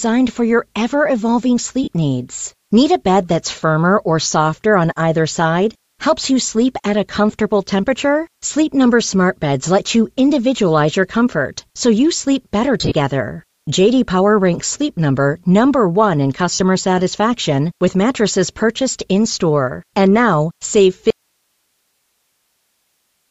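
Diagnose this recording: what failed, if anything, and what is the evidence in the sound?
Bluetooth LC3 compression runs through the whole recording, at the codec stage. The speech carries a breathy, grainy edge, with the upper band thinned and replaced by noise-like fill, and the damage is plainly audible. This is likely an LE Audio link coding at a low rate, which fits about 32 kbps with 7.5 ms frames. The transform codec drops the upper spectral detail it cannot afford and fills the gap with shaped noise.

Lost LE Audio frames occur at three points, a fault in the wireless transport. At 1.83 to 1.88 s there is a short smear of about 37.5 ms, which fits five frames. At 12.79 to 12.92 s, just after "so you sleep better", the losses are scattered over 120 ms, with runs up to roughly 30 ms. At 16.54 to 16.61 s, just before "satisfaction with mattresses purchased", they cover about 60 ms. 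In each gap the decoder repeats the last spectrum with randomised phase, so the speech turns briefly hazy rather than going silent.

An audio dropout to a faint residue begins at 21.10 s, right after "now save", and lasts to the end. The speech cuts off abruptly, not as a pause or fade, and only hiss remains, about 50 dB below the signal. The path downstream stayed live while the source vanished. The likely cause is the link or upstream feed dropping out, with the playback side passing only its own noise floor.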